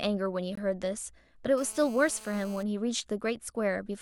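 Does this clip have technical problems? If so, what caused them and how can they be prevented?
Yes, there are two separate problems in this speech clip.

First, a gap between stream segments shows up from 0.55 to 0.58 s. It's a short hole of silence, a bit over 20 ms, with hard edges on both sides. The timestamps of two adjacent segments don't quite meet, leaving about 20 ms unaccounted for, so the player pads it with silence. Nothing is actually lost; the sound just stops and restarts abruptly. To prevent it, make sure the packager writes segment timestamps that line up exactly end to start.

Second, there's GSM phone buzz from 1.58 to 2.63 s: a hard, raspy buzz at 217 Hz with a stack of harmonics, sitting about 21 dB below the speech and having nothing to do with it. A 2G phone nearby was on a call, transmitting in bursts about 217 times a second, and something in the audio path rectified those radio pulses into audible buzz. 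Because a call keeps the bursts going, the buzz holds steady for that whole stretch. Keep phones well away from mics, cables and interfaces, or put them in airplane mode while recording.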